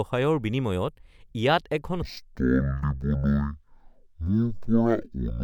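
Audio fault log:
2.02–5.43 s stereo read as mono: the speech drops to half speed and an octave lower, because interleaved left and right samples are played in sequence as one channel. Unlike a sample-rate mismatch, a faint mirrored copy of the sound sits in the upper half of the spectrum.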